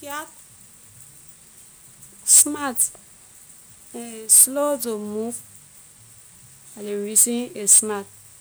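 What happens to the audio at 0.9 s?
Nothing goes wrong at 0.9 s: the speech runs on intact through that moment, with no dropout, click or distortion.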